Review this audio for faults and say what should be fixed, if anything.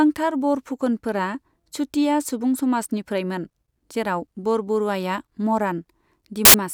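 Near the end of this speech clip, from 6.45 to 6.54 s, a burst of static cuts in. It lasts about 90 ms. It starts and stops with hard edges. This is file tags played as audio. The player read an embedded cover picture as if it were samples. Compressed image data looks random, so it plays as very loud white noise. To prevent it, make the decoder skip tag and picture blocks so only real audio data reaches playback.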